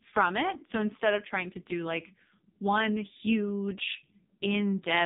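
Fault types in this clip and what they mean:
AMR narrowband mobile codec: The speech sounds buzzy, muffled and synthetic throughout, with nothing above about 3.8 kHz. A narrowband mobile codec rebuilds the voice from a coarse vocal-tract model, and this heavy damage fits one of its lowest modes, around 5 kbps.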